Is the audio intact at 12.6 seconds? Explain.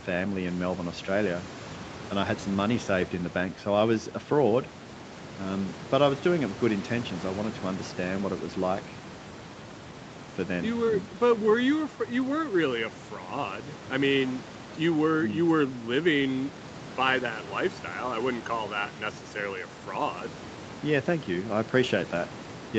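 Yes, the speech at 12.6 seconds is intact, with no fault at that moment.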